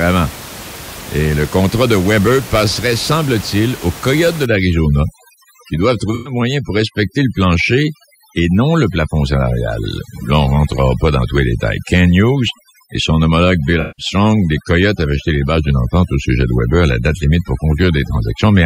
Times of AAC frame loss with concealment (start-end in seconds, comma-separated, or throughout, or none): 6.15-6.33, 13.81-14.06